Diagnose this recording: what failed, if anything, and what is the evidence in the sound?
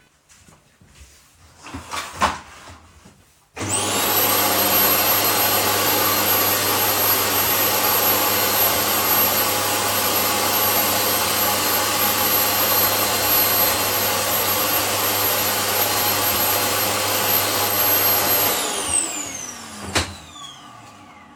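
Reception is where this one failed: at 17.67 s the tuner dropped the digital signal and cross-faded over 119 ms to the FM broadcast, a digital radio blending to analogue. Hiss comes up roughly 35 dB below the signal, the level stays put, and it blends back to digital at 20.15 s.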